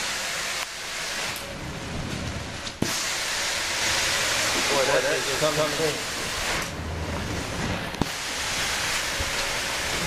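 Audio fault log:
3.81–5.91 s, doubled audio track: A second full-band copy of the sound runs about 150 ms behind, at roughly equal loudness. It starts and stops abruptly, with no decay or room colour. This likely comes from a slower second capture path mixed in.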